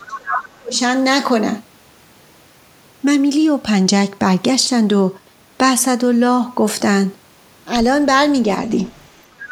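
From 0.00 to 0.79 s the speech dips by up to about 30 dB, most likely speech suppressed in double talk as the echo canceller attenuates both talkers together. From 0.01 to 0.18 s the other side's voice leaks through about 15 dB below the speech, and again faintly from 8.95 to 9.07 s, likely residual loudspeaker echo left in the microphone path.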